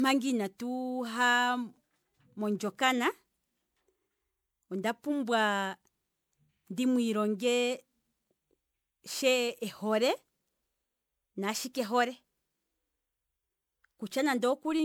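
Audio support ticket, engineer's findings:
Swirly, smeared, hollow speech throughout; consonant attacks blurred, worse than one pass at a rate fitting 128 kbit/s MP3 would give; nothing above 20.9 kHz. Likely generation loss: MP3 decoded and re-encoded about seven times, each pass requantising on a shifted frame grid, stacking noise and spectral holes.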